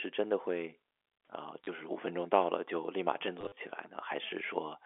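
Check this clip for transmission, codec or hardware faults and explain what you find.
There's one kind of fault here, packet loss with the last packet repeated, and it shows up twice over a telephone-band line that sounds like G.711 coding. At 1.64 s a 30 ms gap gets filled by replaying the previous chunk, which fits 10 ms packets. Between 3.41 and 3.57 s about 90 ms goes missing in bits scattered across 160 ms, the longest run 40 ms. Each replayed chunk is spliced in without regard to the pitch cycle, and the sound gets a brief robotic, stuttery buzz.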